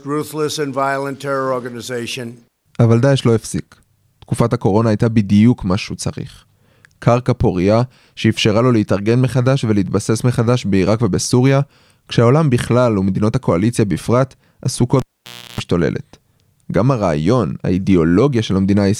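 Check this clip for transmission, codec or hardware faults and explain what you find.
There is one hardware fault: a cable pulled and plugged in, from 14.99 to 15.60 s. A live cable is briefly disconnected and reinserted mid-speech. A sharp pop marks the break. The signal then drops to near silence for about 0.56 s. While the plug goes back in, only its tip makes contact. The unshielded connection picks up 60 Hz mains buzz for about 0.33 s. A second pop follows as the full connection returns.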